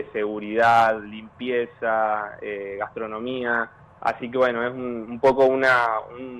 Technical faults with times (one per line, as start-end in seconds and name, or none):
0.00-6.39 MP2 compression